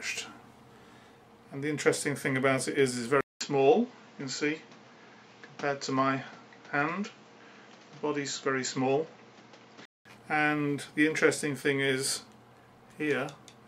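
The input was likely switched to a poorer device at 3.21 s, with a silence of about 200 ms at the changeover. From there until 10.05 s, nothing above 7.6 kHz gets through, so the sound turns duller and boxier. A new background noise sits roughly 30 dB below the signal, though the overall level barely changes. At 10.05 s the original input returns and the full brightness comes back.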